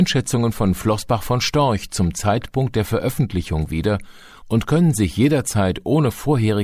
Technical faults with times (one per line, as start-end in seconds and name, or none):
none